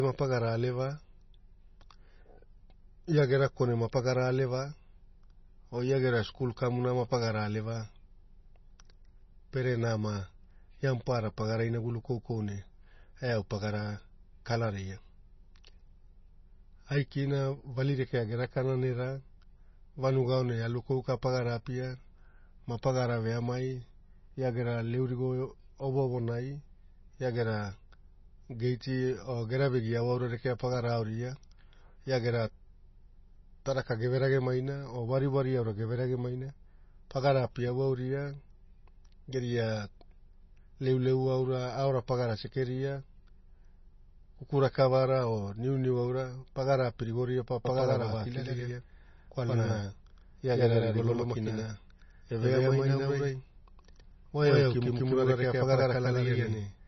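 From the first second to the last, the speech sounds dull and watery, with nothing above 5.9 kHz and a swirling, metallic edge on s sounds and sharp onsets that smear. This is most likely heavy MP3 compression at a low bitrate, consistent with roughly 24 kbps. Short of bits, the encoder has cut the treble at a fixed point and drops weaker frequency components, which flicker in and out from frame to frame.

At 47.65 s the speech abruptly gains a hard, clattery double, as if every syllable is spoken twice about a tenth of a second apart, and this continues to the end. The likely cause is a doubled audio track: a second full-band copy of the same signal, about as loud as the first, mixed in at a fixed lag. Because it carries no decay or room colour, it sounds like a flat repeat rather than an echo.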